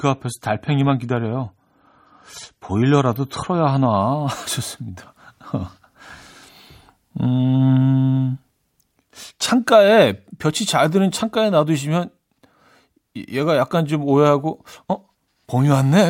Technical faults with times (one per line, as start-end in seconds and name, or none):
0.00-4.00 adaptive stream starting at a low bitrate